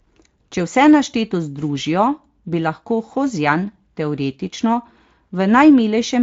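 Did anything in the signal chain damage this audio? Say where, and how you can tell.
No, nothing along the chain damaged this speech. It has passed through a Speex codec, and the only trace is a light codec colouring that points to a fairly generous setting of roughly 28 kbps.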